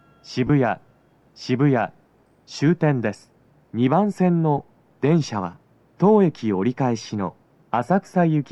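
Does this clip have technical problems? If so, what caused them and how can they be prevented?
Yes. At 0.47 to 0.50 s the sound briefly turns into a short, grainy smear, and at 4.58 s there is a shorter smudge of the same kind. These come from lost LE Audio frames. The Bluetooth link dropped audio, and the LC3 decoder filled each gap by replaying the last spectrum with scrambled phase. The first gap lasts about 22 ms, which fits three 7.5 ms frames, and the second lasts 7.5 ms, which points to a single frame. Both gaps are too short for the fill to fade toward silence. The light coding of the stream itself is not what causes these blips. To prevent them, keep the transmitter and earbuds close with a clear line of sight, and reduce 2.4 GHz interference or raise the link's retransmission margin.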